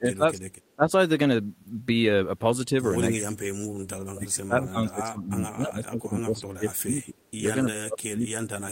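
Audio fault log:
0.00–0.46, 0.76–0.91, 3.14–3.76, 4.12–7.23 and 7.63 to the end, speech suppressed in double talk: the speech keeps sinking by about 20 to 30 dB, most of all across the long stretch from 4.12. This is likely an echo canceller that couldn't separate the talker from far-end echo, so it ducked both.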